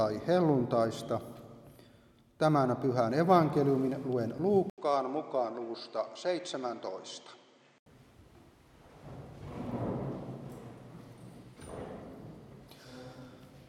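At 4.70 s there is a short gap of about 80 ms. The sound then turns duller, with nothing above 8.8 kHz. It drops somewhat in level and gains a faint new noise floor. It recovers at 7.86 s. This points to an input switched to a poorer device, likely a narrower-band microphone.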